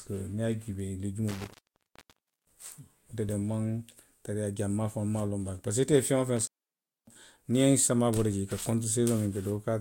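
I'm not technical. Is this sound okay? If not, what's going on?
No. There's an intermittent contact, a loose cable or plug briefly opening, from 1.29 to 2.71 s and from 6.37 to 7.16 s, right after "ite ye feŋ woo". The speech cuts out for about a second, then about 0.6 s. Crackle at each break tells it apart from a clean digital dropout.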